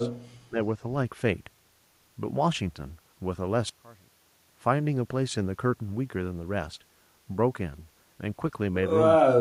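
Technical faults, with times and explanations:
0.00–0.09 s, 0.48–0.58 s and 9.18–9.41 s, speech suppressed in double talk: The speech dips briefly. The drops grow deeper each time, from about 15 dB to about 35 dB near the end. This is likely an echo canceller ducking the talker while the far side also spoke.
3.69–4.49 s, one channel inverted: For about 0.8 s the speech falls away by about 23 dB and turns faint. This is likely one channel with reversed polarity, so the shared centre cancels when the channels are summed to mono.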